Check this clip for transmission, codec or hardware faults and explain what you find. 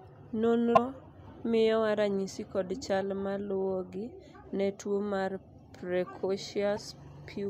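There are two short glitches in the speech, at 0.75–0.78 s and 6.75–6.78 s. Both are brief skips about one 26.1 ms frame long, most likely a broken MP3 bit reservoir: frames dropped, so the next one borrowed bytes that weren't its own.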